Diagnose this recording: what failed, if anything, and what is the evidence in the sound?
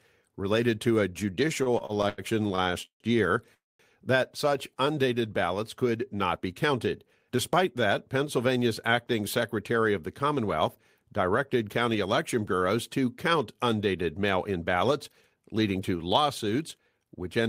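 Packets arrived late at the network jitter buffer, causing repeated stalls (stutter) from 1.63 to 3.03 s: twelve concealed gaps totalling 409 ms, longest 151 ms, dragging speech.

From 3.54 to 3.82 s a call audio freeze inserts 251 ms: continued sound, then about 210 ms of silence, likely from delayed packets emptying the jitter buffer.

Jitter buffer speed-up trims pitch periods to shed excess delay: 5.90 to 7.87 s runs at 110%, removing about 0.2 s; 15.08 to 15.71 s at 112%, hurried.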